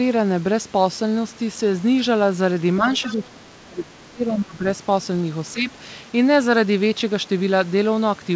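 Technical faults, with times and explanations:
2.97–3.13 s, other side's voice leaking through: a brief, faint second voice sits under the talker for about 0.16 s, around 20 dB below the main speech. It is likely residual loudspeaker echo: the far end's audio played out of the device and reached the microphone, and the echo canceller failed to subtract all of it.
3.03–4.65 s and 5.54–5.68 s, speech suppressed in double talk: the talker's level sinks while the far side is playing. The first stretch affects roughly 1.5 s, dipping as deep as about 25 dB, and the second is a shorter 150 ms dip of about 10 dB. Both sides likely spoke at once, so the canceller could not separate the talker from the echo and turned everything down; the call audio around it is band-limited with an 8 kHz ceiling.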